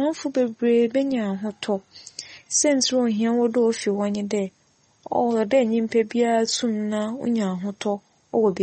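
Throughout the speech, the sound is watery and swirly, s sounds carry metallic chirps, and nothing is heard above 8.4 kHz. The likely cause is MP3 compression at a low bitrate, around 32 kbps, cutting the treble and zeroing weak frequency lines.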